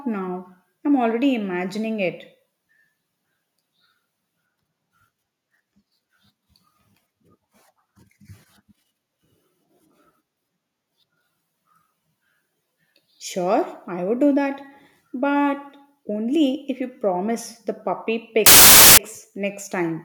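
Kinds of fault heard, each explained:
File tags played as audio: A block of metadata stored in the file, here the compressed data of an embedded cover picture, is decoded as if it were sound samples. Because compressed bytes are effectively random, the result is a burst of very loud white noise with abrupt, hard edges. It runs from 18.46 to 18.98 s, about half a second, right after "the puppy".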